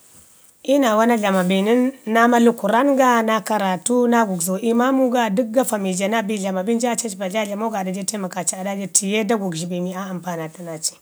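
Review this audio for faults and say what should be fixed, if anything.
Nothing stood out on listening to this speech recording, so there is nothing here that needs fixing.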